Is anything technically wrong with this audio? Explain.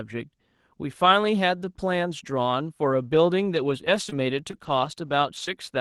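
Yes. Between 3.87 s and 5.49 s the speech has scattered short gaps. About three packets went missing or arrived too late, one at a time, adding up to roughly 60 ms of lost audio, each hole no longer than about 20 ms. The receiver covered each loss by extending the preceding sound, stretching reconstruction across about 220 ms. You hear brief ticks, smears or hiccups in otherwise clear speech, carried over a call codec whose top end stops near 12 kHz.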